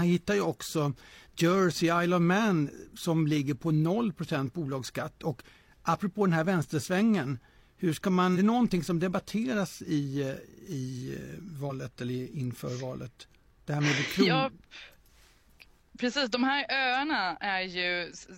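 At 8.32 to 8.37 s and again at 11.66 to 11.71 s, the speech is broken by damaged data in a compressed stream. Corrupted bytes make the decoder misread those frames and lose sync until it finds the next valid frame header. Each burst lasts about 50 to 60 ms and sounds like a short chirp, squawk, click or brief hole.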